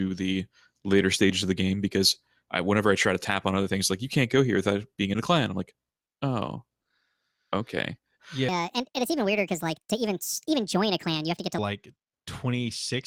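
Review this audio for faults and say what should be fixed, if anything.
A section at the wrong speed runs from 8.49 s to 11.58 s, where the speech plays about 1.54 times faster than it was recorded and rises roughly seven semitones, so it sounds high and hurried before snapping back at the end. Speed and pitch shift together here, which points to a playback or editing step that likely read this stretch against the wrong sample clock. Re-render that section at its original rate to fix it. To prevent it, confirm every clip's sample rate matches the project rate before editing or export.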